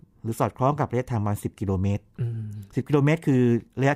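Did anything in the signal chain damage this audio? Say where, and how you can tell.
No, nothing in the chain audibly damaged this speech.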